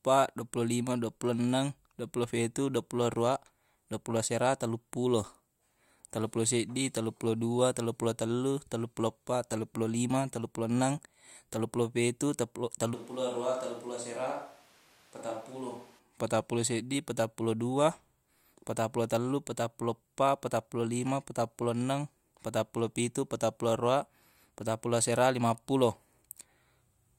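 From 12.95 s to 15.98 s the speech abruptly turns roomy and hollow, loses its low end, drops by about 10 dB and sits over audible room noise. At 15.98 s it snaps back just before "patappulo seddi patappulo". The likely cause is a switch to a distant microphone after the close one dropped out. A simple gain dip would not add room tone or thin the bass, and added reverb would not make the background noise rise in step.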